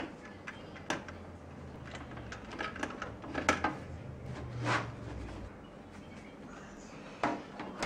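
Overlapping chunks: each 2.5 s block starts 6.5 ms before the previous one ends, so that sliver plays twice, clicking or stuttering at 1.76, 4.26 and 6.77 s.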